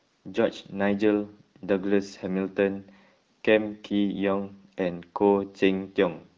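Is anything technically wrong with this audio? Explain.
No, nothing here is actually wrong; it's speech carried over the AMR wideband (HD Voice) codec at 12.65 kbit/s, a rate where that codec is working as intended.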